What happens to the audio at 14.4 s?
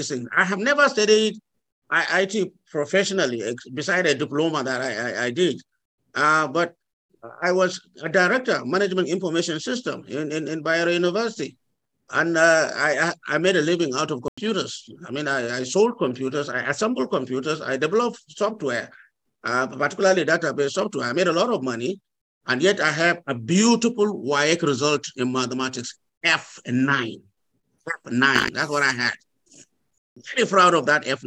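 At 14.28 s the sound drops out abruptly into silence. This is a corrupt frame muted. Damaged compressed data failed to decode, and the player filled the gap with nothing. The hole lasts until 14.38 s, fitting one lost frame. Timing resumes unchanged.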